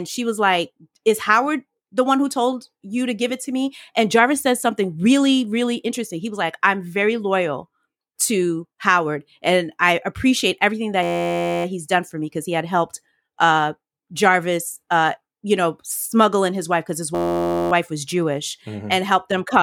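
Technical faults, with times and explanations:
11.03–11.65 s and 17.15–17.72 s, system hang loop: After "and I appreciate everything" and again after "his wife because his", the sound collapses into a steady buzz at 86.1 Hz for just over half a second. Then it resumes with "he's done for me" and "wife was", with essentially nothing missing. A tiny 11.61 ms slice, which fits a 512-sample buffer, repeats exactly 53 and 49 times while the system stalls and the audio hardware keeps replaying its ring buffer.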